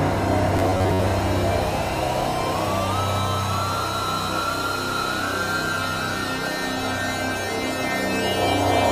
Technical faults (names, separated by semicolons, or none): robotic sound from repeated short buffers